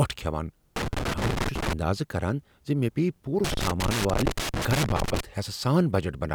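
Loose connector crackle appears from 0.76 to 1.73 s and again, for longer, from 3.44 to 5.20 s. In both stretches the speech is broken up by an irregular, scratchy crackle. A worn or dirty contact somewhere in the cable or jack keeps making and breaking as it shifts, so the signal path is rapidly chopped on and off. The uneven rhythm of those interruptions is what gives the bursts their rough, scratching texture.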